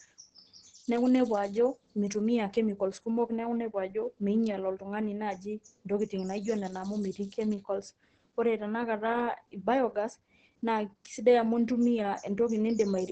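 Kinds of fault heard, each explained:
Opus voice compression: the speech is hoarse and slightly robotic throughout, not merely dulled as by filtering, with nothing above 12.5 kHz, which fits SILK coding near 10 kbps.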